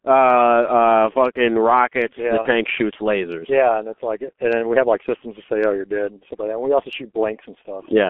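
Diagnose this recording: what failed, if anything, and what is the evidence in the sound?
The codec stage ran the whole recording through the G.723.1 codec, and the heavy damage suggests a rate near 6.3 kbit/s. Speech is confined to 250 Hz to 3.4 kHz, sounding muffled and hoarse, with consonants smeared because the coarse 30 ms frames track the voice only slowly.

At the network stage, VoIP packet loss was concealed by the speech codec between 2.43 and 2.48 s, after "fucking rockets yeah the" and before "shoots lasers yeah and". The decoder extended its last pitch and filter at falling gain, leaving a brief stretched, dulled patch consistent with one lost 30 ms frame.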